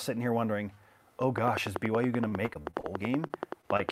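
From 1.38 s to the end of the speech, a train of clicks ticks over everything at a steady 10.6 per second, the sharpest ones standing roughly 15 dB above the voice and also heard in the pauses. The even spacing and much the same shape of each pulse separate this from random crackle or codec damage. It points to an outside source, likely electrical interference or a faulty connection or power supply, rather than anything in the transmission.

Between 2.28 and 2.85 s, repeated packet loss gives the speech a choppy, robotic quality. Six separate gaps, the longest 37 ms, were each patched by stretching the preceding sound, so about a quarter of that stretch is reconstructed rather than real. Unlike the clicks, this alters the voice itself. It comes through as a stuttering texture with pieces missing, not as pulses laid on top.

Three isolated short concealed packet losses follow, at 3.27–3.31 s, 3.61–3.65 s and 3.77–3.81 s, each with about 20 ms of audio missing. 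Here the decoder bridged a single brief hole by extending the last sound and then blended back in. Each is heard as a momentary smear or wobble. Because each gap stands alone rather than coming in a rapid cluster, the voice doesn't turn robotic the way it does around 2.5 s.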